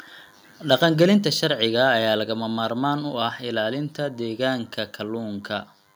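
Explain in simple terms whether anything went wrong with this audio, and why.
A faint, thin buzz sits under the speech the whole way through. This is DECT cordless phone buzz: a nearby cordless phone or base station pulses 100 times a second, and the audio circuit picks those radio bursts up as sound.

From 0.72 to 1.04 s the loudest speech turns harsh and crackly. That is microphone overload, likely from the input volume being set so high that the peaks were chopped off.

At 1.23 s the speech and background suddenly drop to a quieter level. This is the microphone volume stepped down, likely by the call software reacting to the distorted peaks just before.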